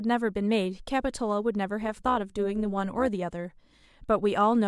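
Overlap-add ripple runs from 1.81 to 3.09 s: the speech was split into windowed frames and rejoined with overlaps that fail to sum to a steady gain, so the level swings by about 6 dB at around 200 Hz, giving a metallic buzz with extra tones around the voice.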